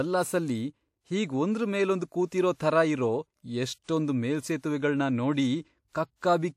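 A transform codec is spreading quantisation noise across whole blocks, so before sharp onsets a short hiss leaks ahead of the attack, giving pre-echo at 2.09 s before "ಕೂತಿರೋ ಥರ ಇರೋ", 2.56 s before "ಥರ ಇರೋ", then 3.83, 4.58 and 5.89 s, each 31 to 55 ms long, softening and smearing the attacks.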